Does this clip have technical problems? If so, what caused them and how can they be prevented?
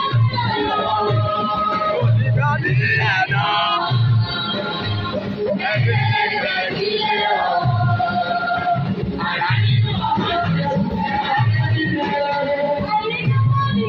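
No, nothing in this clip stood out as a technical problem on listening.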